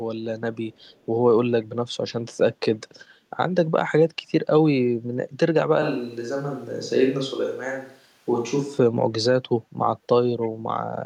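A speech clip with two kinds of fault. From 0.73 to 1.06 s, and again briefly from 10.42 to 10.49 s, there is echo leak: a very faint delayed copy of the speech trails it by about 0.3 s, noticeably stronger in the second instance. This most likely comes from a far end on loudspeaker whose echo canceller let some residual through. On a spectrogram it shows as a weak ghost of the preceding harmonic pattern, shifted right by 299 ms. In the waveform it is a low-level smear filling what should be gaps.

From 5.82 to 8.78 s the sound abruptly turns roomy and hollow, with thinner bass, then snaps back. This is a switch to a distant microphone, likely because the close microphone's signal dropped out and a farther one took over. Loudness barely changes, so the waveform envelope stays similar. The spectrogram, though, shows reduced low-frequency energy, reverberant tails blurring the harmonics, and a faint broadband noise floor rising between syllables, with sharp vertical boundaries at both switch points.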